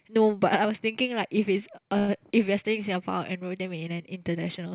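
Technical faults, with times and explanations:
1.98–2.10 s, call audio freeze: for about 0.1 s the speech stops advancing and the last sound is drawn out as a fading buzz or hiss that never reaches silence, then the speech resumes exactly where it stopped, so nothing is lost and everything after runs 0.1 s late. The likely cause is delayed packets emptying the jitter buffer. Unlike a packet-loss dropout, no speech is skipped, and the filler carries the same 4 kHz-limited G.711 call bandwidth.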